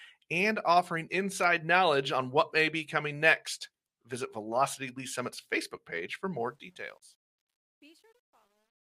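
Truncation distortion on a fade runs from 6.40 s to 8.99 s as the speech fades out. The fade is rendered with only 11 bits and no dither, so the dwindling waveform collapses into coarse square steps. From 7.23 s onward the tail turns gritty.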